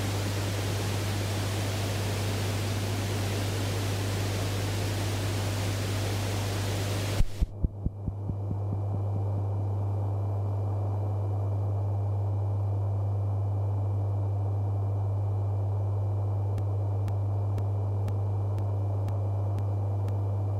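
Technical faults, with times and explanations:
16.58 to 20.09 s, periodic USB or driver dropouts: regular ticks every 0.5 s, around seven in all, each a gap of a couple of milliseconds dropped to silence. Something blocking the USB bus or audio driver at a fixed interval removes a sliver of audio each time.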